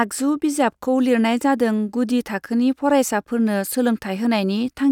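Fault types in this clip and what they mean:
No technical faults can be heard anywhere in this speech recording. There is nothing in the signal that calls for a fault entry here.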